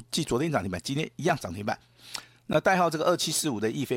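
At 1.29 s and again at 2.53 s the speech drops into a block of digital silence, where the output buffer likely wasn't filled in time. The first gap is about 3 ms and clicks like a tick; the second runs about 12 ms and dips. The lengths fit 128- and 512-sample buffers.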